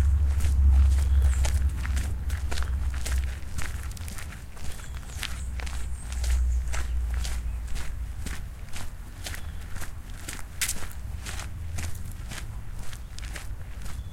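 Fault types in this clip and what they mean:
No faults are present.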